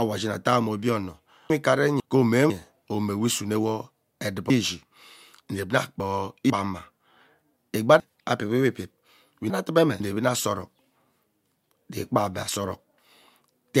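Chunks out of order at 1.5 to 2.5 s, 4.5 to 6.5 s and 8.0 to 10.0 s, just before "omowe isunewo" and "enevi ana asa orok". A 500 ms chunk plays late, one chunk behind at first, then three, so the speech jumbles briefly across its three hard joins.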